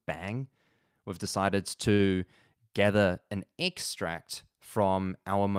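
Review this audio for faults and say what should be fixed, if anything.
A short stall from a late packet occurs at 1.93 to 2.02 s: a packet arrived late, the jitter buffer ran dry, and the receiver stretched the last sound by about 59 ms before resuming where it left off. Nothing is lost, but that stretch of speech is held too long and everything after it lands 59 ms later. A deeper or adaptive jitter buffer would absorb late arrivals like this without stalling playback.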